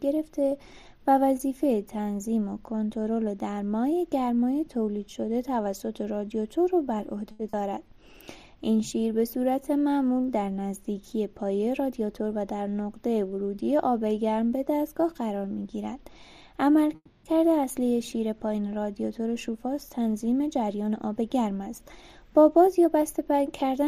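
A short stall from a late packet comes first, at 7.31 to 7.41 s. A packet arrived after it was due, the jitter buffer ran dry, and the receiver held the last sound for about 80 ms until the data turned up. Playback then resumed from the same point, so nothing is lost, but the sound hangs on too long with a faint buzzy sustain. The audio now runs 80 ms later than before.

Short concealed packet loss follows closely, at 7.49 to 7.55 s. Here about 40 ms of audio never reached the decoder in time. The receiver bridged the hole by extending the preceding sound and then blended back into the real signal. The result is a brief smear or flutter where that 40 ms of material is simply gone.

Jitter buffer speed-up first appears at 11.59 to 12.29 s. Too much audio had built up in the buffer, so the receiver trimmed short pitch-period slices again and again, cutting around 70 ms in total. Playback runs at about 110% speed with unchanged pitch, and the passage sounds rushed.

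A call audio freeze sits at 16.95 to 17.25 s. The sound is stretched into a buzzy tail for about 280 ms, including roughly 40 ms of silence, before carrying on from exactly where it stopped. The likely cause is packets held up in transit, which emptied the jitter buffer. Nothing is missing, but a gap has been inserted and the delay rises by 280 ms.

Jitter buffer speed-up returns twice to work off that added delay. From 19.20 to 21.22 s it runs at about 108%, removing roughly 150 ms. From 22.42 s to the end it runs at about 106%, removing about 100 ms. Both stretches keep their pitch but feel hurried compared with the surrounding audio.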